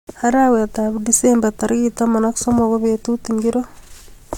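Speech recording with no audible technical faults anywhere in the signal.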